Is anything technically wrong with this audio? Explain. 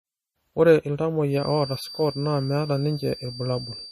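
Yes, there are two problems. Throughout, the speech sounds watery and swirly and nothing is heard above 15.2 kHz, likely MP3 compression at a low bitrate around 40 kbps, which drops weak frequency lines frame by frame. From 1.28 s to the end, a thin steady 4.7 kHz whistle sits well below the speech, likely a feedback whistle from a speaker-to-microphone loop held near its threshold. It swells and fades slowly in level rather than swirling like the codec damage.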